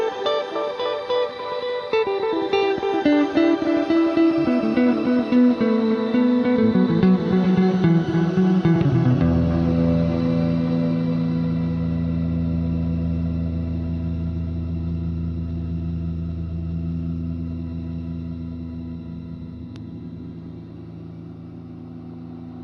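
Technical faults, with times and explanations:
No technical faults can be heard in this audio.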